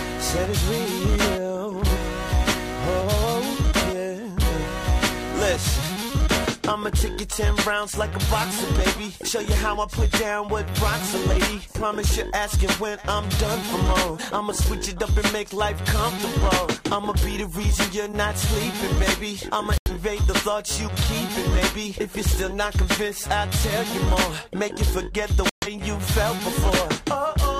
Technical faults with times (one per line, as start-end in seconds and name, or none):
19.78-19.91 digital broadcast dropout
25.49-25.68 digital broadcast dropout